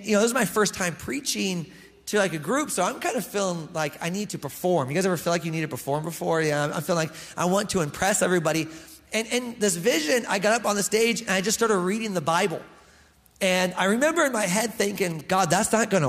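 Near the end, from 14.96 to 15.68 s, GSM signalling bursts break in as galloping ticks and 217 Hz buzz, about 20 dB below the sound. A nearby 2G phone's radio pulses are being rectified by the audio circuit.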